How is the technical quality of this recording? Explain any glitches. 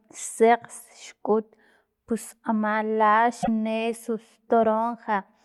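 One glitch stands out in the speech, from 3.40 to 3.48 s. It is damaged data in a compressed stream: a short run of corrupted bytes that the decoder misread, losing frame sync until it found the next valid header. The result is a brief glitch lasting about 80 ms, the kind heard as a chirp, squawk, click or short hole.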